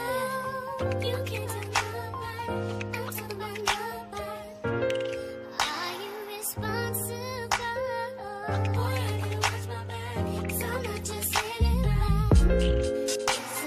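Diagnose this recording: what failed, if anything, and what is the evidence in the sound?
Nothing in the recording stood out as a fault on listening, at any stage of the signal chain.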